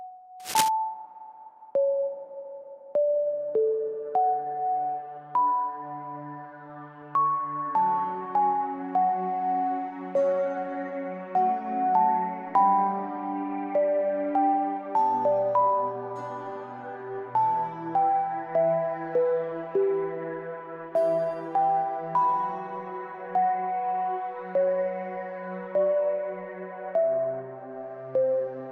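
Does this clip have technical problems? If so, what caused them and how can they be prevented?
Yes. Cable scratch noise runs from 0.40 to 0.69 s, a dense, uneven burst of scratching only a little quieter than the main sound. It is likely caused by a worn cable or connector shifting, its contact resistance fluctuating rapidly. Replacing or securing worn cables and connectors before recording prevents it.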